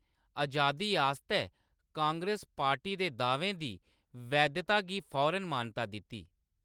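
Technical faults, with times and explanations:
No technical faults can be heard in the speech. The Opus voice compression is working as intended, with the band reaching up to about 20.2 kHz and only light coding texture, consistent with hybrid-mode Opus at a moderate rate.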